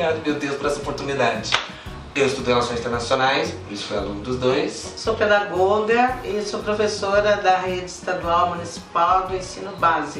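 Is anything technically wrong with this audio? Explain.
No, nothing technically wrong can be heard here.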